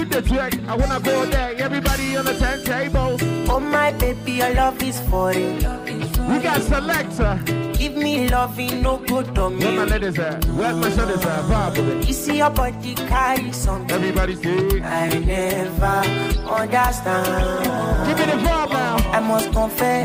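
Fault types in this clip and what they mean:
Nothing stood out as a fault on listening.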